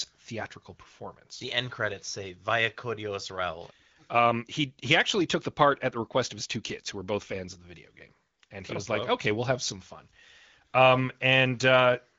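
No technical faults can be heard anywhere in this recording.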